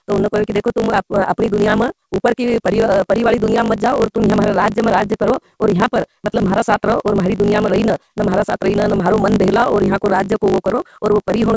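Throughout the clip, a block size mismatch (truncated) means one stage writes longer blocks than the next reads, which fits 512-sample blocks, so each block's tail is discarded. The speech runs 1.6 times fast with its timbre kept, with a steady 50 Hz buzz, and the G.722 call codec removes content above about 7 kHz.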